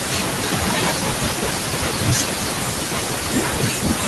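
A short speech recording, about 4 s long, carries noise suppressor artifacts from start to finish. The room noise, sitting about 15 dB below the speech, is pushed down frame by frame in the bands the suppressor judges to be steady noise. It drops away in the gaps and comes back under the speech. On a spectrogram the background shows as patchy, blinking speckles instead of an even haze, with hollowed bands around the speech energy. Speech cut by the noise suppressor runs the whole way through, from 0.0 to 4.07 s. The suppressor mistakes softer parts of the speech for noise and turns them down along with the background, by about 21 dB at the deepest point, so quiet consonants and word endings sound swallowed or faint. The waveform shows those tails clipped short into near-silence, and the spectrogram shows high-frequency consonant energy missing or broken off abruptly.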